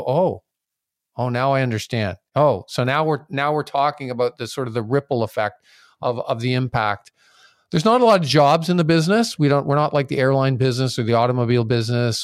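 Nothing in this speech recording points to a technical fault at any moment.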